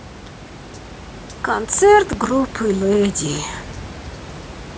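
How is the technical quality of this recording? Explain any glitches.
No glitches are audible, and the only thing beneath the speech is the room's own background noise, about 17 dB down, which belongs to the recording space rather than to the system.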